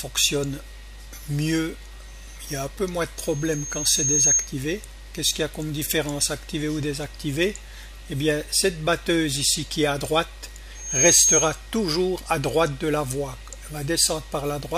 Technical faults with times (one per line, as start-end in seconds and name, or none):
3.17-4.53 loudspeaker feedback squeal
10.75-11.61 loudspeaker feedback squeal